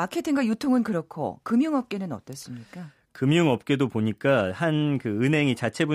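No technical faults can be heard anywhere in this speech recording. Nothing in it calls for comment at any point.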